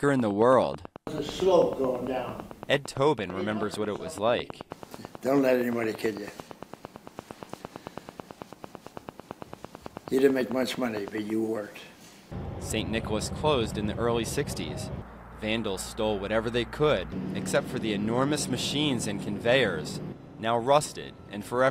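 From about 0.09 s to 11.3 s there's a train of clicks, a steady tick at roughly nine per second, around a hundred in all, poking well above the sound and audible in pauses too. Likely interference from nearby gear or a faulty connection or power supply.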